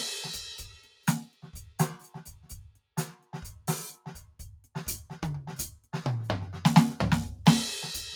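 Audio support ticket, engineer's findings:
Noise suppressor applied to music, entire clip. Speech-oriented suppressor left active on a music source. Steady tones and tails are treated as noise and pulled down while attacks pass. Gain swings of around 5 dB cause audible pumping and a thinned, fluttering sustain. Probable component: noise suppression stage in the capture or processing chain, not bypassed for music content.

Sound cut by the noise suppressor, 0.71 to 1.07 s and 1.28 to 1.43 s. Held material is classified as noise and ducked hard, with the deepest drop about 12 dB. Sustained portions sink and decays are cut short, while transients survive. Symptom is two brief dips in level in quick succession. Probable component: the same suppressor.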